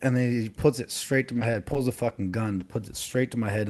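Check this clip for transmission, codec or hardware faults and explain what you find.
One transmission fault is present: scattered short gaps. They fall between 1.35 and 2.62 s in this speech, passing through a call path whose top end stops near 12 kHz, which fits Opus. There are about four small holes, none much over 20 ms. Packets arrived late or not at all. The receiver filled each hole by extending the preceding sound. The result is brief ticks and smears scattered across that stretch of speech.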